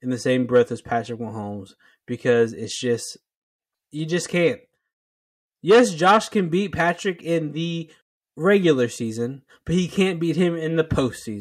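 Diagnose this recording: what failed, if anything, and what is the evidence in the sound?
The converter failed: its sample clock shows sample clock jitter throughout the speech. A faint hiss and grain rides on the voice. It thickens on loud passages and on sibilants and other bright sounds, then disappears in the pauses. The timing error is on the order of a microsecond. Each sample lands slightly early or late. Fast-changing parts of the waveform therefore pick up the largest errors. The resulting noise sits roughly 45 dB below the speech.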